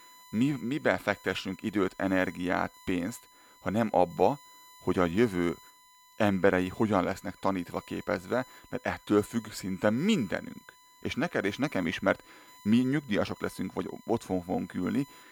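From the first second to the last there's a steady, fixed-pitch tone sitting under the speech at 1 kHz, which is textbook USB whine. The bus pulls current in 1 ms frames, and that 1 kHz ripple is getting into the audio through the power or ground connection. It sits roughly 30 dB below the speech, so it's quiet but constant, and you'll catch it most easily in the pauses.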